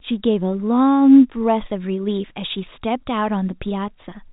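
No faults detected in the speech; the band stops near 3.8 kHz, as expected of the G.711 telephone coding it carries.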